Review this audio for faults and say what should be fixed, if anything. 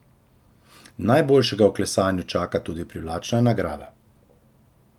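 Nothing stood out on listening to this speech recording, so there is nothing here that needs fixing.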